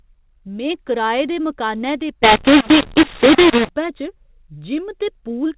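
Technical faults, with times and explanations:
2.24 to 3.69 s, mu-law and A-law mixed up: right after "कराए दे मकानै दे", samples that were encoded with G.711 A-law are decoded as mu-law, so each 8-bit code is read against the wrong logarithmic curve. Some levels come out too loud and others too quiet, and the softest codes are pushed well above silence. The speech turns harsh and distorted, and its pauses fill with noise. Outside that stretch, the A-law telephone coding at 8 kHz sounds band-limited below 4 kHz as expected.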